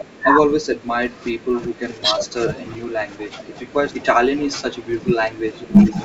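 Throughout the clip a steady buzz at 100 Hz rides under the speech, rising and falling with its level. That is a filter restarted on every block: each block begins from silence and sets off a small transient. Because the buzz tracks loudness and keeps a fixed rate, it is a processing fault rather than mains hum.

From 0.0 to 5.96 s the speech dips repeatedly, losing about 15 dB at its deepest, across roughly five seconds in total. This is speech suppressed in double talk, likely an echo canceller that could not separate this talker from the far side and turned both down. The level drops in pieces, unlike a dropout, where the sound stops outright.

Three brief delayed copies of the speech also appear. The first is at 0.0 to 0.04 s, about 15 dB below the speech and delayed by 405 ms. The second is at 1.56 to 1.6 s, about 20 dB down and delayed by 408 ms. The third, from 5.62 to 6.04 s, is the strongest at about 10 dB down, with a delay of 417 ms. 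This is echo leak, likely from residual loudspeaker sound that the canceller failed to remove. A room reflection would arrive within a few tens of milliseconds, but these copies come back as a distinct repeat of the speech at a consistent delay of about 0.4 s.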